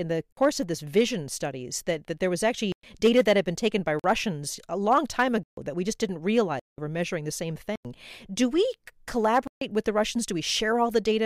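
The speech drops into a block of digital silence seven times: at 0.33, 2.72, 3.99, 5.43, 6.60, 7.76 and 9.47 s. The holes last 46 to 186 ms, which fits output buffers left unfilled in time. Each is heard as a short hole.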